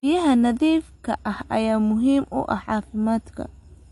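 From start to end, the speech carries plainly audible damage from what is likely MP3 compression. Nothing sounds above 11.3 kHz, where the encoder cut the treble to save bits, which fits a low rate around 48 kbps. Unlike a simple low-pass filter, which only dulls the top, weak frequency lines here flicker on and off between frames, giving s sounds a watery, swirling, metallic chirp and smearing consonant attacks.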